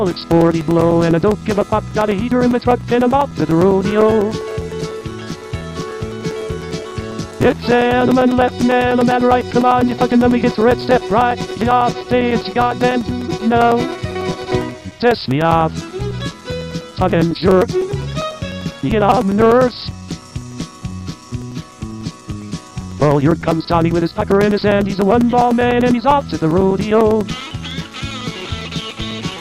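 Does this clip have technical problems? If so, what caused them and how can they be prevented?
Yes. Periodic USB or driver dropouts run from 0.11 s to 29.3 s. Every 0.1 s a background task stalls the bus or audio driver, and about 4 ms of audio becomes silence, producing a steady ten-per-second ticking over the sound. A waveform shows evenly spaced flat gaps, and a spectrogram shows thin, regularly spaced vertical broadband lines. To prevent it, raise the audio buffer size, update the driver, disable the offending polling task, and give the interface its own USB controller.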